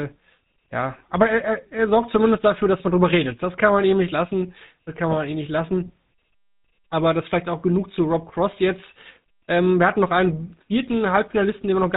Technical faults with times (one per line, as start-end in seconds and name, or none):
0.00-11.96 GSM full-rate codec